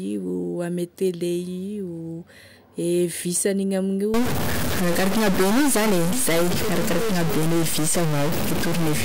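From 4.14 s to the end, a likely stuck bit adds errors of about -20 dBFS, heard as harsh, buzzy distortion, with noise filling the pauses.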